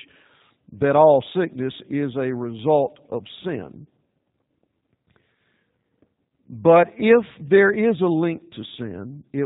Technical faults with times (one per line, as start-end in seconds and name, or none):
0.00-9.45 G.729 codec